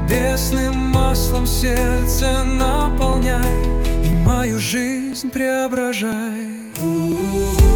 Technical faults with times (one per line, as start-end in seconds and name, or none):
0.14-7.12 periodic USB or driver dropouts